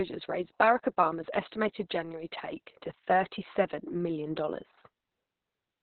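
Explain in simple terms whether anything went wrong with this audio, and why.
Yes, something went wrong, and it affects the whole recording from start to finish. The speech sounds muffled, hoarse and a little robotic, as if heard through an old telephone. The cause is heavy Opus voice compression. To save space, the encoder threw away everything above about 4.3 kHz, which is where crispness and clarity live. It also described the voice's buzz only roughly, which adds the rough, synthetic edge.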